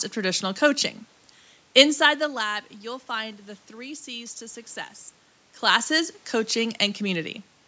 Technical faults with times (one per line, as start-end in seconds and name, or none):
none